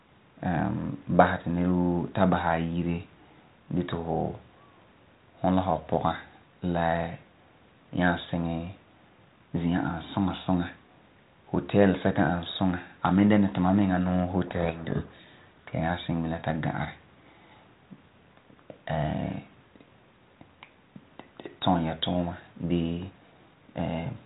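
From 14.46 to 15.69 s, between "duma miŋa nuu" and "ya nyaa kiŋɛ bilam", a codec payload misread buries the speech in harsh distortion. The G.726 code words are being read with their bit order reversed. On a spectrogram, broadband noise fills the band up to the 4 kHz ceiling, and the waveform turns dense and jagged.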